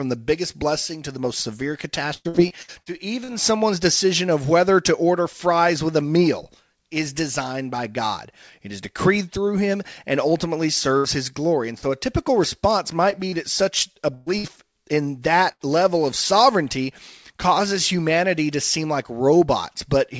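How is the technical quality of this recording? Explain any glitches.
The recording is marred by several packet-loss glitches, clustered in two places. The audio passed through a call codec with nothing above 8 kHz, which fits G.722.

Repeated packet loss (robotic sound) runs from 2.14 to 3.62 s. Seven separate gaps, the longest about 0.11 s, were each patched by extending the preceding sound. Together they fill roughly a quarter of that stretch. The speech turns choppy, with fragments missing. On a spectrogram, the harmonics flatten into smeared horizontal bands at each gap. The waveform shows a broken, stuttering envelope.

Four bursts of packet loss hit the speech at 10.98–11.06 s, 14.14–14.28 s, 14.38–14.46 s and 15.52–15.62 s, lasting 60, 120, 60 and 80 ms. In each one, consecutive packets failed to arrive in time. The receiver stretched the last sound while fading it, which turns voiced parts into a held buzz and other parts into a dying hiss. 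Speech then resumes with material skipped. A spectrogram shows frozen, steady harmonics tapering off, and the waveform shows a decaying block.

Short concealed packet loss occurs at 11.78–11.84 s (about 40 ms missing) and 13.10–13.14 s (about 20 ms). The decoder synthesised these brief holes from the preceding pitch or from shaped noise, then crossfaded back into the real audio. Each one is heard as a momentary smear or wobble. On a waveform it appears as a small, oddly smooth patch, and on a spectrogram as a thin, slightly blurred vertical strip.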